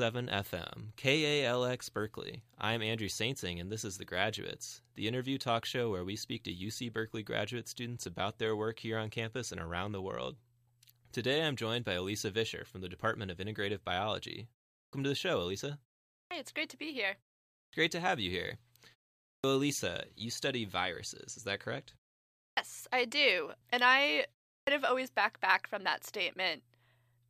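From 14.81 s, then 16.2, 17.62, 19.32, 22.47 and 24.57 s, there's a clipped start after a pause: the output wakes late, so each phrase loses its first 100 to 120 ms and bursts in abruptly.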